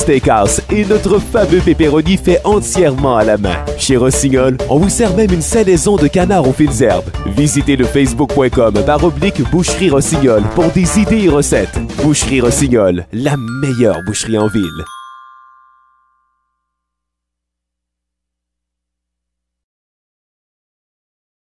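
The signal carries no audible technical faults at any point in the recording.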